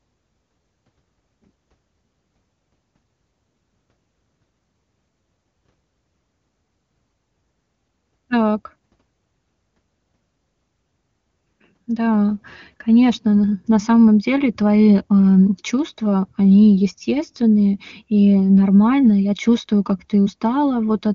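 A speech clip with nothing technically wrong in it.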